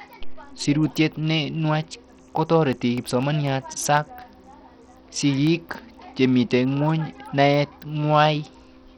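From start to finish the speech has dull, flickering treble with gritty noise and aliasing riding on it, most likely Bluetooth SBC compression at a starved bit pool. The damage is heavy and fits a bitrate near 64 kbps, leaving the upper sub-bands few or no bits.

From 2.73 to 5.97 s, periodic USB or driver dropouts replace brief slices of audio, each about half a millisecond, with silence every 0.25 s. That gives roughly fifteen evenly spaced ticks, audible only while speech is present.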